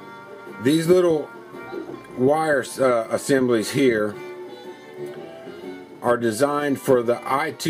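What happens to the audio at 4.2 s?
Nothing goes wrong at 4.2 s; the audio runs on intact through that moment, with no dropout, click or other fault.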